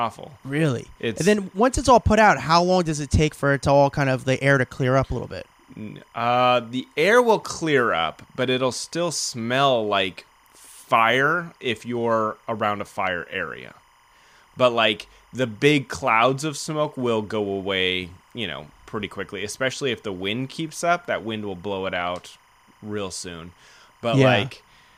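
A faint chirping warble near 1 and 2 kHz runs beneath the speech throughout: timecode bleed, 25-frame linear timecode leaking from an adjacent track or cable.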